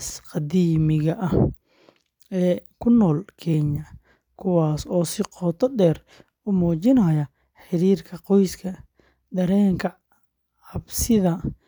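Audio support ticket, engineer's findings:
Listened to the full speech recording and found nothing that stood out as a problem.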